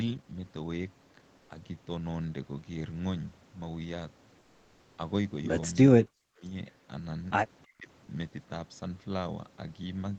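From 1.37 to 1.49 s and again from 4.39 to 4.97 s you get comfort noise in place of the background: the real room tone turns flat and featureless, about 2 dB quieter, likely Opus DTX filling the gaps. At 6.01 to 6.43 s and 7.63 to 7.89 s the speech is suppressed in double talk, dipping hard, on the order of 40 dB at worst, likely the echo canceller ducking both sides. Right after, at 8.05 to 8.07 s, there's a tiny bit of sound dropped by the voice detector, roughly 10 ms of speech swapped for noise, likely DTX deciding it was background. All of it sits under an 8 kHz ceiling, which fits an Opus call at around 20 kbps.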